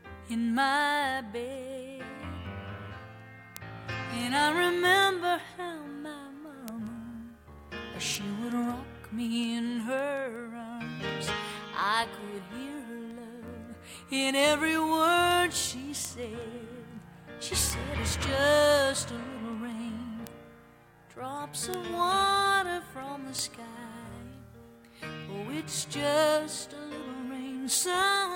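The audio carries word clock ticks through its whole length, from 0.26 s to 28.35 s. They arrive at a steady rate, roughly every 0.2 s, about 150 in all. The receiving device is running on its own clock, not locked to the sender's digital link. The two clocks drift apart by around 100 ppm. Each time they slip past one another, a single sample is dropped or repeated, and a tick results.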